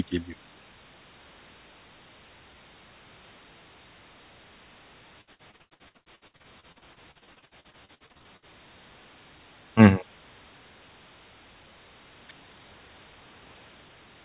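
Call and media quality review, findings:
Repeated packet loss (robotic sound), 5.21–8.45 s: packets repeatedly lost or late on the call path, with some thirty gaps (longest 87 ms), each filled by extending the preceding audio. About 41% of the span is concealed, making the speech choppy. Band-limited at 4 kHz, fitting G.711 A-law at 64 kbps.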